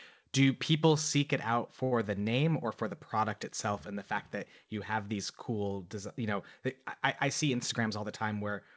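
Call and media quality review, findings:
Short stall from a late packet, 1.84–1.94 s: speech sound held about 77 ms with faint buzz, nothing skipped. Jitter buffer underrun; receiver stretched last audio until the packet arrived, adding 77 ms delay. Spectrogram: harmonics frozen flat, slight energy dip; waveform: repeating cycles.

Jitter buffer speed-up, 7.53–8.38 s: speech runs 108% speed, pitch unchanged, sounds hurried. Buffer over target; receiver trimmed pitch periods, roughly 70 ms total. Waveform: cycles cut out, syllables compressed; spectrogram: shortened segments, G.722 band ending at 8 kHz.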